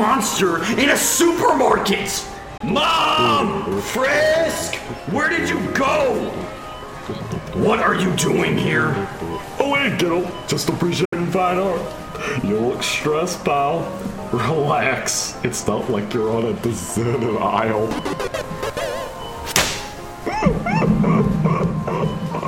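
At 2.57 s the sound cuts out for about 23 ms. At 11.05 s it drops again, for about 70 ms. Both gaps begin and end abruptly or with a fade of a few milliseconds, and the sound resumes further along. This is likely a Bluetooth dropout, where late packets were discarded.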